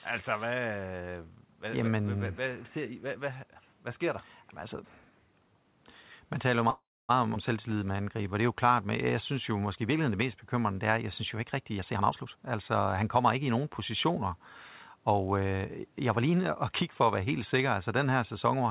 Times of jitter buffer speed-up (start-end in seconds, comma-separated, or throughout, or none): 11.78-13.79